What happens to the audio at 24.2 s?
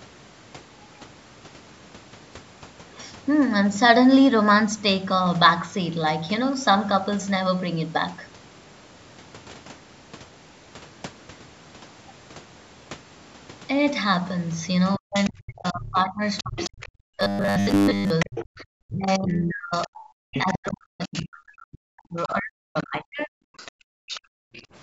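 At 24.2 s two faults overlap. The talker's speech is being suppressed in double talk, a stretch running from 14.97 s to 24.46 s that adds up to roughly seven seconds of affected sound, with the deepest dips around 40 dB down. The likely cause is that the echo canceller, facing both parties talking at once, could not separate the near voice from the loudspeaker echo and turned the whole signal down. Unlike a network dropout, the loss tracks the far side's activity, so the voice sinks or breaks into fragments rather than vanishing in clean, fixed-length gaps.

At the same moment the other side's voice is leaking through, from 22.18 s to 24.63 s, sitting about 15 dB below the talker. It likely reaches the microphone from the device's loudspeaker and survives echo cancellation only partly. It sounds like a second voice underneath, not a repeat of the talker's own words, which separates it from a simple echo.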